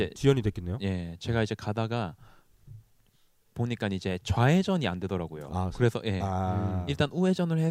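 No technical faults can be heard anywhere in the speech. Nothing in the recording calls for a time stamp or a fix.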